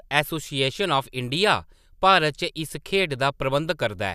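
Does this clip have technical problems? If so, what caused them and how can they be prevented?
No, no technical faults here.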